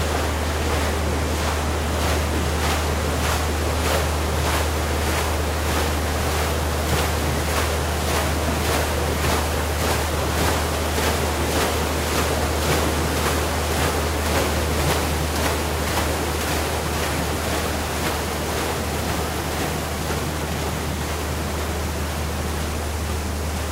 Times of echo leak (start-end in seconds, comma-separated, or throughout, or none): none